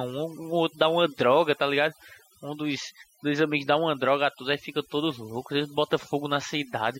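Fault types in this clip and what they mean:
overdone noise removal: Across the whole speech clip the pauses fall to near silence flecked with twinkling specks, and the voice has its softer detail hollowed out. This comes from a noise reduction process pushed far too hard on a noisy recording: any frequency band that sits close to its noise estimate is cut deeply or switched off, so isolated bands flicker on and off as residue, and the quieter parts of the voice are stripped away along with the noise.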